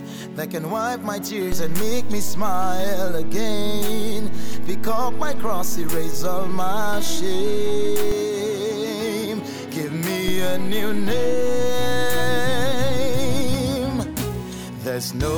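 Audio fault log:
1.52–8.12 s and 10.28–13.54 s, DC step: the waveform's zero line jumps by about -14 dBFS, then about -16 dBFS, and returns each time, giving low thumps at 1.52, 8.12, 10.28 and 13.54 s while the sound carries on unchanged.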